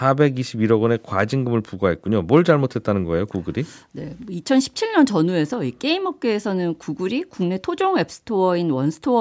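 The speech carries no technical faults, only the expected marks of call microphone processing: the lowest bass is trimmed away and nothing sits above 8 kHz.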